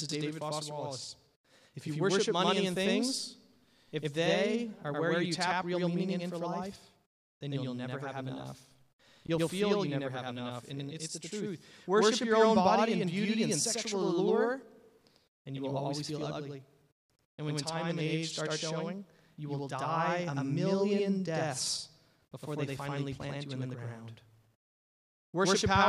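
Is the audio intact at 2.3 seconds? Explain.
No. At 2.3 seconds the speech is affected by channel delay (doubling), which runs through the whole clip. One channel arrives late by about 93 ms, which fits a 4096-sample buffer. When the two channels are summed to mono, the late copy does not blend in. It sits at the same level as the original, so each sound is followed by a distinct second copy. This is heard as a doubled, slapback echo on the speech.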